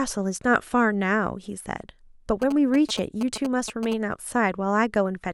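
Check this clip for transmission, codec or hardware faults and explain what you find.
GSM signalling bursts run from 2.42 to 3.94 s over the speech. A nearby 2G phone exchanging short signalling bursts induces radio energy that the audio circuitry rectifies into sound, giving a galloping dit-dit-dit of brief 216.7 Hz buzzes, sitting not far below the speech level.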